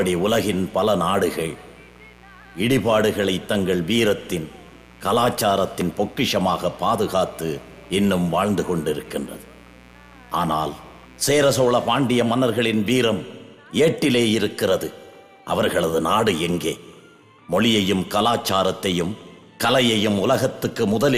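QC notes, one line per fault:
0.00–12.00 s: mains buzz. A steady, raspy buzz sits about 25 dB below the sound, then stops. Sharp switching spikes arriving twice per 60 Hz cycle spread harmonics up into several kilohertz, giving a gritty rasp rather than a pure low hum.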